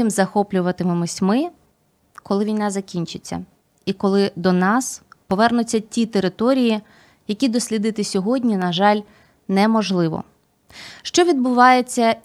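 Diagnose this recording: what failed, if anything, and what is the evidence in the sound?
No stage in the chain, from analogue wiring through converter, buffer, format conversion, call processing, network, storage and playback, leaves any audible failure in this speech recording.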